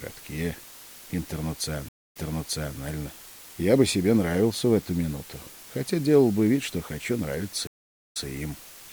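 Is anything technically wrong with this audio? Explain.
Yes, there are two faults. A constant, even hiss runs through the whole clip, roughly 20 dB below the signal, with no distortion. This is low bit depth with dither: the audio is rounded to 7 bits with dither added, so the error becomes steady white noise.

At 1.89 s and 7.67 s the sound cuts out for 0.22 s and 0.43 s. It then resumes 0.67 s and 0.14 s earlier, repeating what was just heard. Each is a stream reconnect: the connection dropped, a fresh decoder started mid-stream, and the server resent recent audio.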